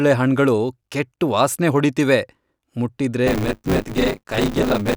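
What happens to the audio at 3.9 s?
The program filling the playback ring buffer and the hardware reading it have slipped out of step. From 3.26 to 4.95 s each buffer carries roughly two fifths stale audio, about 20 ms old, with hard joins. That buffer tearing puts a robotic 100 Hz buzz on the speech.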